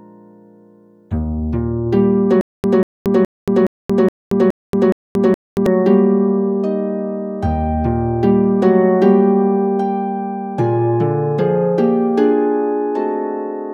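From 2.41 to 5.66 s the audio shows a stutter with silent gaps: a 190 ms burst repeats seven times, separated by 228 ms of digital silence, giving an even 419 ms cycle. This is likely a stalled player or stream replaying its last fragment. Unlike dropouts, the same material returns each time.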